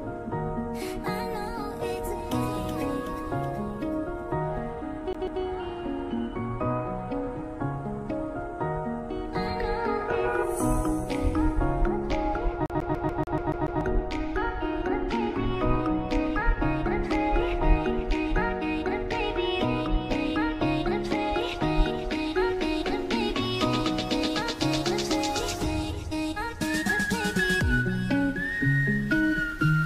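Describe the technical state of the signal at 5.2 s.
At 5.2 s the CD is stuck on one turn: from 5.13 to 5.42 s a 144 ms slice repeats twice, each jump marked by a brief mute. That even, mechanical stutter sets it apart from a plain dropout.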